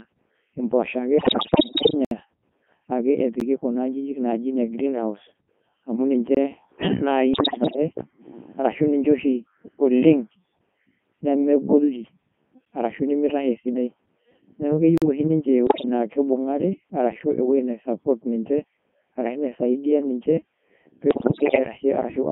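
The whole thing is speech squeezed through the Codec 2 vocoder at 3.2 kbit/s in a 150 Hz to 3.4 kHz band. Only pitch, voicing, energy and a spectral envelope get sent, so it comes out heavily buzzy and robotic.

From 1.18 to 1.94 s there's a rough patch of bit errors on digital voice radio, with something like one bit in seven flipped. Each corrupted frame comes out at the wrong pitch, level and tone, so you get warbly, bleepy gibberish.

Right after, at 2.05 to 2.11 s, there's a 64 ms block of digital silence: hard cuts to zero and back, most likely the output buffer not getting filled in time. Shorter ones follow as ticks at 3.40 s (about 12 ms) and a small hole at 6.35 to 6.37 s (21 ms, which fits a 1024-sample buffer).

Bit errors return more mildly, roughly 7 percent, from 7.34 to 7.76 s. Then there's another silence tick at 12.65 s (9 ms) and a 43 ms gap at 14.98 to 15.02 s, consistent with a 2048-sample buffer.

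A brief, heavier burst of bit errors, around 15 percent, garbles 15.67 to 15.85 s. A milder one hits again at 21.11 to 21.59 s.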